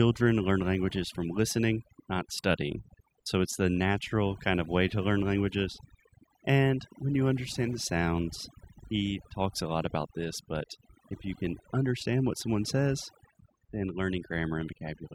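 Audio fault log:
Throughout: overdone noise removal. The noise reduction was pushed too hard, so frequency bands near the noise estimate get pulled down or cut out entirely, taking quiet speech detail with them. The background drops and breaks up into twinkling specks.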